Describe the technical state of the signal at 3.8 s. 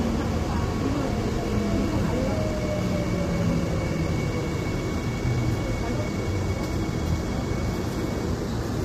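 At 3.8 s the sound carries low-delay AAC compression, as it does throughout the clip. The damage is plainly audible: a rough, grainy texture that likely comes from AAC-ELD's short frames at a bitrate that fits roughly 32 kbps. A spectrogram shows noise filling gaps between components and nothing above 15.6 kHz.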